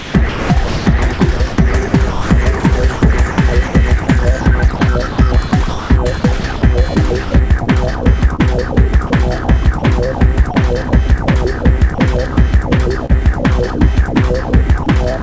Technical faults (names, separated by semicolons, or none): sound chopped by the voice detector; sound dropped by the voice detector; short concealed packet loss